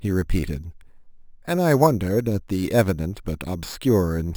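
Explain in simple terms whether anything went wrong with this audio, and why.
Imaging from sample-and-hold upsampling runs through the whole clip. The speech was raised from 12 kHz to 48 kHz by simply repeating each sample, without smoothing, so mirror copies of the speech appear between 6 and 12 kHz, adding a metallic fizz that tracks the voice.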